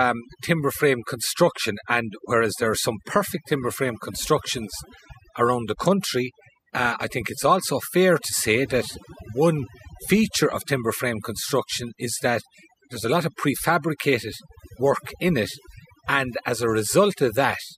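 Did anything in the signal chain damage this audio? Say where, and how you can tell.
Yes, two things. The first is overdone noise removal somewhere in the processing, and it runs the whole length of the speech. The background drops to an unnatural near-silence full of little twinkly specks. The denoiser was set too aggressively, so it's switching individual frequency bands off whenever they sit near its noise estimate. That takes the quiet parts of the voice along with the hiss.

The second is Wi-Fi interference getting into the analogue wiring, from about 13.7 s right to the end of the clip. You can hear a steady tick roughly ten times a second, spaced at 102.4 ms, which is the standard Wi-Fi beacon interval. It sits about 35 dB below the speech. A nearby radio's bursts are being picked up and rectified by the audio circuit, so they land in the signal as clicks.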